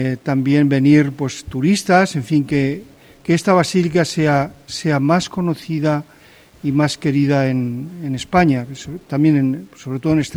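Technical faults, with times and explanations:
Throughout, low bit depth without dither: a grainy, gritty distortion follows the sound, roughest in quiet passages, where the faintest parts sputter or drop out. The likely cause is undithered rounding consistent with 9 bits, leaving error around 40 dB below the signal.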